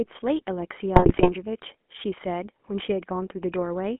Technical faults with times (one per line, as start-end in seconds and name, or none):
0.00-4.00 GSM full-rate codec
0.96-1.32 GSM bit errors